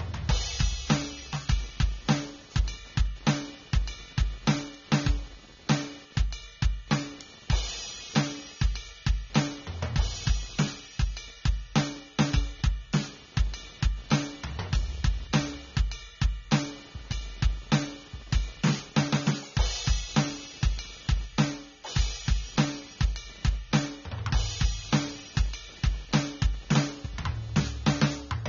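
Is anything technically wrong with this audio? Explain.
Yes, two faults run through the whole music clip.

Computer activity noise: a buzzing, chirping or scratching pattern pulsing at around 300 Hz, about 25 dB below the music. Processor or peripheral load shifts the shared audio ground, so it follows the computer's activity rather than the music.

AAC compression: the music sounds plainly dull and smeared, with nothing above 7 kHz and a warbling or fizzy texture. This is likely low-bitrate AAC-LC, around 24 kbps, cutting the top band and coarsely quantising the rest.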